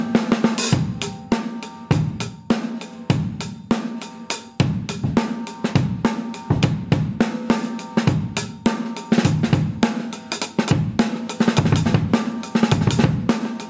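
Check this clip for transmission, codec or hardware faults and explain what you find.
Gain pumping runs through the whole clip, with a level swing of around 20 dB. The likely cause is gain set far too high, so a fast limiter clamps every peak, squashing the dynamics. On a waveform the peaks look flattened; on a spectrogram nothing shows above the call processing's ceiling at 8 kHz.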